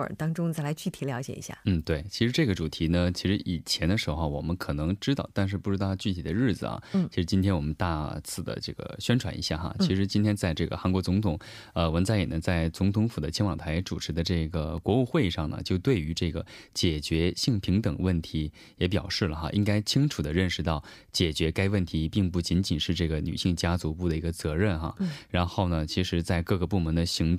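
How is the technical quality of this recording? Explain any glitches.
One glitch stands out. At 14.78 s there is a block of digital silence lasting about 1.3 ms, which fits a 64-sample buffer left unfilled. The abrupt drop to zero and back produces a brief tick.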